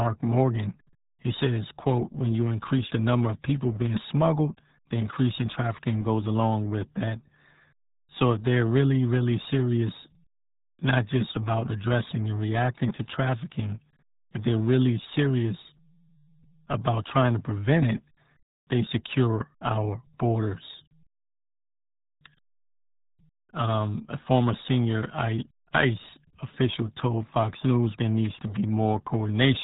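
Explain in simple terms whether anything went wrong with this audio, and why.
Yes. The speech went through the RealAudio 14.4 codec, a dial-up-era format that discards everything above 3.8 kHz, so the whole clip sounds muffled and gargly.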